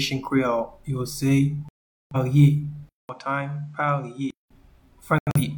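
At 1.69 s the sound drops out to silence and stays gone until 2.16 s, a hole of about 0.43 s, which fits roughly ten lost frames. This is a digital broadcast dropout: the receiver stopped getting valid frames and muted its output rather than play corrupted data. Whatever was transmitted during that gap is simply missing when the sound resumes.

From 2.89 s to 4.51 s the sound goes dull and boxy, with nothing above 9.4 kHz. It drops about 10 dB in level and picks up a faint new background noise roughly 40 dB below it, and the change begins with a 200 ms silence. The likely cause is an input switched to a poorer device: recording moved to a narrower-band input with its own gain and noise floor.

From 5.18 s to 5.41 s a second digital broadcast dropout breaks the sound into two short holes rather than one gap. About 128 ms is lost in all, scattered over roughly 170 ms, with the longest single hole about 85 ms. 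Here the receiver failed on a few frames in quick succession, muting briefly between the good ones.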